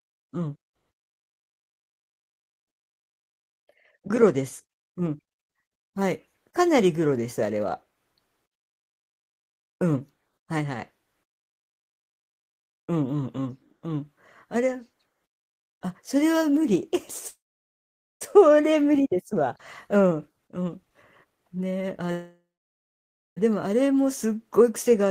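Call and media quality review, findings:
Call audio freeze, 17.27–18.23 s and 22.12–23.39 s: short fading buzz, then near-silence; likely delayed packets draining the jitter buffer. Speech resumes intact, adding 0.93 s and 1.25 s delay.

Jitter buffer speed-up, 19.33–22.11 s: speech runs at 126% speed, same pitch, sounding hurried. Pitch-period chunks were cut repeatedly, roughly 0.7 s in all, to shed excess buffered delay.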